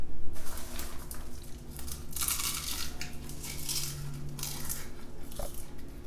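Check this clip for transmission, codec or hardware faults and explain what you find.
No faults can be heard anywhere in these sounds.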